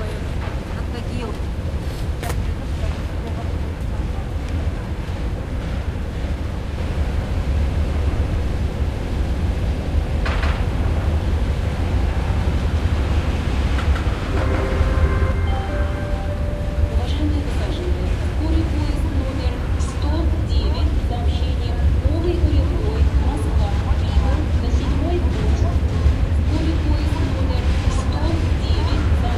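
Everyday sound, and from 6.78 to 15.32 s everything is heard twice: a second copy at about the same level trails roughly 150 ms behind, clean and undecayed, appearing and vanishing abruptly. This doubled audio track likely comes from the same signal being captured again through a slower path.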